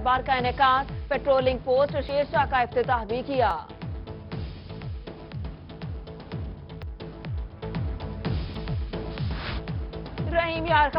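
At 2.09, 3.51, 6.83 and 8.55 s the audio jumps forward, with no gap of silence. Each is likely a dropped buffer from an overrun: samples were overwritten before being read, and the two sides were joined directly. About a twentieth of a second vanishes at 2.09 s, a shorter slice at 3.51 s, and nearer a fifteenth of a second at 6.83 and 8.55 s. The waveform shows a sudden step, and the spectrogram a thin vertical broadband line.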